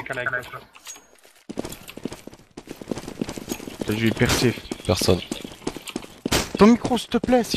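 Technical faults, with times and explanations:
0.58–0.60 s, 2.67–2.69 s and 5.60 s: damaged data in a compressed stream. Each is a brief chirp, squawk, click or short hole of about 20 ms where corrupted bytes keep the decoder from reading the frame correctly, so it misreads or drops the frame and then resyncs on the next valid header. On a spectrogram each shows as a thin vertical break in the surrounding pattern. The waveform shows a short disturbance with an abrupt start and end.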